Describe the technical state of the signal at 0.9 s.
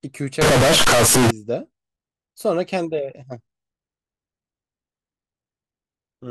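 At 0.9 s the speech is in a float-read-as-integer burst, 0.41 to 1.31 s. It sounds nearly square, harsh, very loud. Likely 32-bit float samples read as 32-bit integers.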